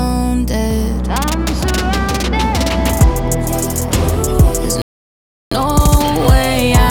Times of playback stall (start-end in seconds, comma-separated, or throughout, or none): 4.82-5.51